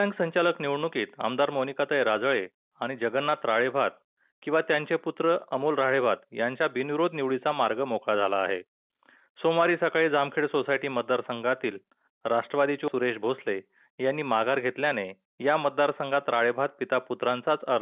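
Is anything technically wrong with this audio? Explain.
No, nothing is technically wrong with this audio.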